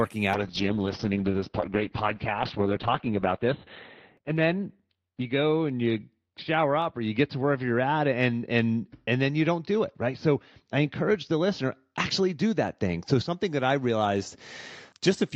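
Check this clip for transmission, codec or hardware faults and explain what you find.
There is one transmission fault, a call bitrate drop, running from 0.35 s to the end of the clip. The encoder was forced to spend far fewer bits, so the speech is coded coarsely and the audio band narrows from 20 kHz to 4 kHz. The voice turns muffled and rough, with a watery texture, and stays worst for about 2.6 s. The dullness and artefacts fit a fall from around 48 kbps to roughly 7 kbps.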